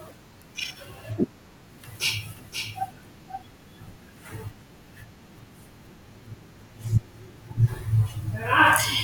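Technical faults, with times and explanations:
2.37–3.43 s, doubled audio track: the speech is heard twice, with a second full-band copy about half a second behind and about 5 dB quieter, dry and without decay, cutting in and out abruptly. This likely comes from a second, slower capture path mixed in.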